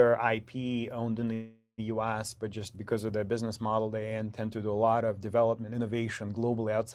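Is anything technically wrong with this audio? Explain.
Yes, there is a call audio freeze from 1.33 to 1.80 s, right after "owned in". Packets were likely held up in transit, draining the jitter buffer, so the receiver stretched the last sound into a fading buzz or hiss ending in about 90 ms of silence. The speech then resumes where it stopped, nothing lost, but everything after runs 446 ms late.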